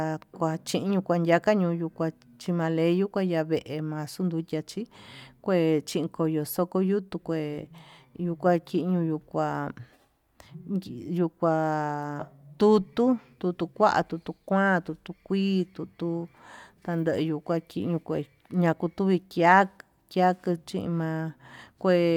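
No technical faults can be heard anywhere in the speech recording.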